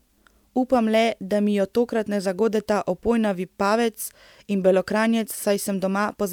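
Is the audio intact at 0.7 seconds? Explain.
Yes, the speech at 0.7 seconds is intact, with no dropout, click, distortion or other fault audible at that moment.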